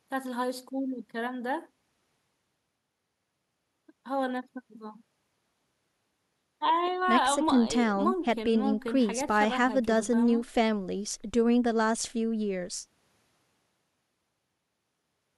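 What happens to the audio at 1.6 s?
Nothing goes wrong at 1.6 s; the speech runs through that moment intact, with no dropout, click or distortion.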